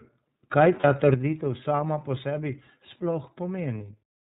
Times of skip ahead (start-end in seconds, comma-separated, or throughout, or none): none